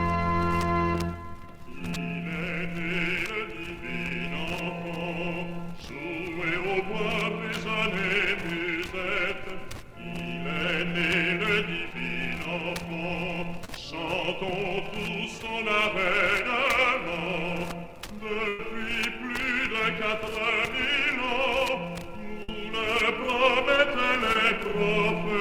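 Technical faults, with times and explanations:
6.60 s, 13.65–13.69 s, 24.33–24.36 s: short concealed packet loss. About 10, 30 and 20 ms of audio never arrived in time. The decoder extended the preceding sound to bridge each hole, so each one is a brief smear or wobble. On a spectrogram it shows as a thin vertical slice where the existing pattern simply carries on, unchanged, before rejoining.
18.48–18.60 s, 22.43–22.49 s: burst of packet loss. About 110 ms, then about 50 ms, went missing in a row. The receiver held the last sound and let it fade, producing a short buzz or hiss, then resumed later with that stretch gone. On a spectrogram this is a band of flat, smeared, decaying energy ending in an abrupt jump in content, with no silent gap.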